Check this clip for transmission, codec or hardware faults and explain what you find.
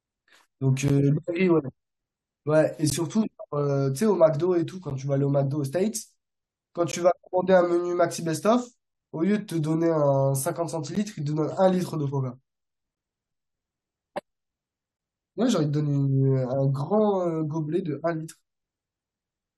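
The speech is interrupted five times by a gap between stream segments. At 0.88, 2.90, 4.90, 6.92 and 10.95 s, the sound cuts to silence for 10 to 17 ms, with abrupt edges on both sides. The spacing fits 2-second segments whose timestamps leave a small hole that the player pads with silence. Each gap adds time, but none of the audio is lost.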